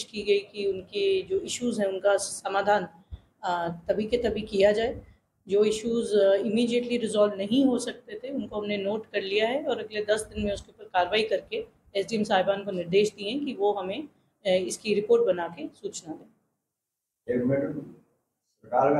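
No technical fault can be heard anywhere in the audio. Nothing in it calls for a time or a cause to be noted.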